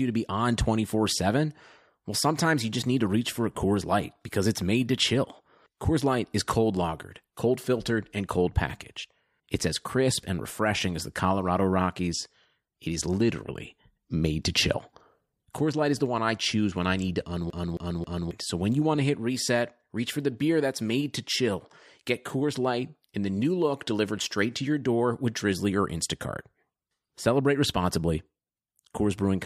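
From 17.50 to 18.31 s the speech sticks like a CD stuck on one turn: a 269 ms slice plays three times, each jump marked by a brief mute. A scratch throws the laser back a track every rotation. On a spectrogram, identical blocks repeat side by side, separated by thin silent gaps.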